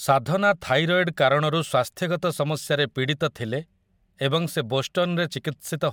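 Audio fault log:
No faults detected in this speech recording.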